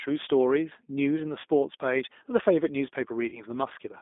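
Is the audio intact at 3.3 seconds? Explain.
No. From 3.28 to 3.42 s there is VoIP packet loss concealed by the speech codec. About 40 ms of audio never arrived, which fits two lost packets. The decoder extends its last pitch and filter with falling gain, so the speech is stretched into a buzzy tone or coloured noise that fades, and stays weak until 3.42 s.

The whole clip also carries the G.729 codec at 8 kbit/s. It rebuilds speech from a filter, a pitch predictor and a few pulses per frame. The band runs from 250 Hz to 3.6 kHz, and the damage is plainly audible as a rough, synthetic quality.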